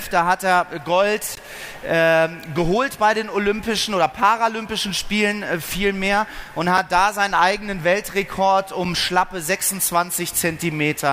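At 1.35 s the audio drops to a block of digital silence about 17 ms long, and at 6.77 s a second, shorter block of digital silence of about 6 ms follows, which fits a 256-sample buffer left unfilled. In both places the samples were replaced by zeros and the signal cuts off and back without any fade. The 17 ms gap is heard as a brief hole, the 6 ms one as a tick.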